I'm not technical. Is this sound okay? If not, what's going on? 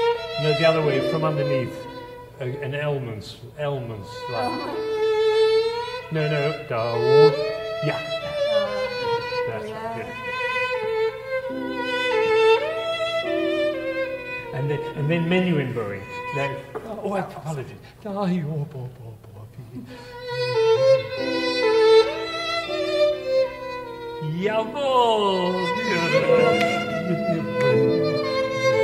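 Yes, this sound is okay, and nothing is going wrong with it.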